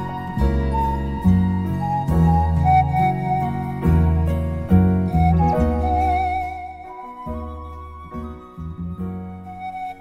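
From 6.12 to 6.66 s, a gain drop of about 15 dB is applied in coarse, unsmoothed steps, around a hundred a second. This is zipper noise: each jump leaves a tiny click, so a fast ticking buzz rides on the sound as it fades.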